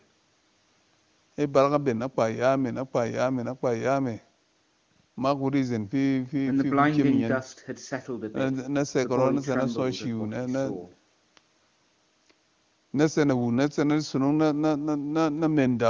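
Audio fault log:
No faults heard.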